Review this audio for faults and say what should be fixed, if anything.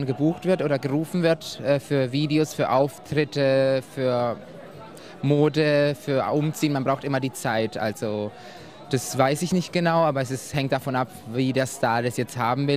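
Nothing here needs fixing; no faults are audible.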